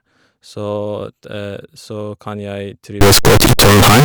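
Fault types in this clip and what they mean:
Integer read as float: from 3.01 s to the end, the speech becomes a blasting, buzzing square wave, fitting 32-bit integer samples decoded as 32-bit float, with values near zero or far past full scale.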